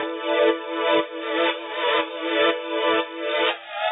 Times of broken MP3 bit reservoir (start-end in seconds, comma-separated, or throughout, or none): none